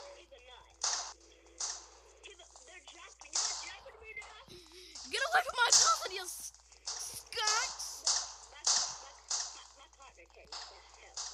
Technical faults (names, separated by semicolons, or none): none